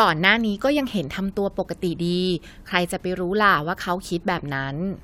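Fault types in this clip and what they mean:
Nothing to flag here; there's no audible fault anywhere in the speech.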